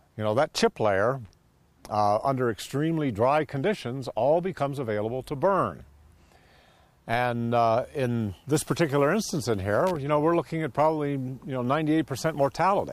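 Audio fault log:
1.25–1.31 s and 9.87–9.96 s, loose connector crackle: a worn contact makes and breaks, chopping the signal into irregular scratchy bursts rather than single clean digital clicks.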